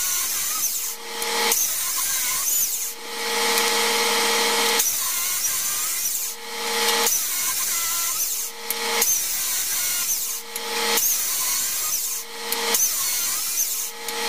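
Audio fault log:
10.02 s and 13.25 s, compressed frames skipped: the audio jumps ahead about a fifth of a second each time, which fits roughly ten lost 23.2 ms frames. A spectrogram shows an abrupt content break.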